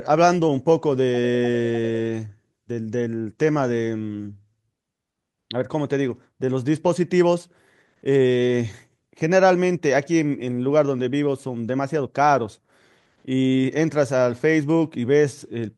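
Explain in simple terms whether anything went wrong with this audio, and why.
Nothing went wrong with this audio; there are no faults to hear anywhere in the speech.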